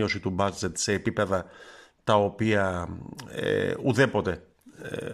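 Nothing technically wrong turns up in this bit of speech; there's no fault to point to at any moment.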